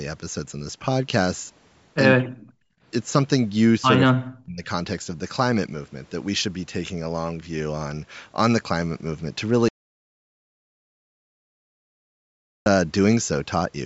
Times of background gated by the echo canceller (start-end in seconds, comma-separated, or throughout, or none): 2.27-2.83